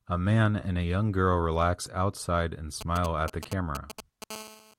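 Right after "girl relax outside and", from 2.81 to 4.24 s, a galloping dit-dit-dit of short 217 Hz buzzes sits roughly 10 dB under the speech. These are GSM signalling bursts: a nearby 2G phone's radio bursts are being rectified by the audio circuit. From 4.31 to 4.74 s a steady, raspy 217 Hz buzz with many harmonics runs about 16 dB below the speech. This is GSM phone buzz, with the phone now transmitting in bursts 217 times a second as in a call.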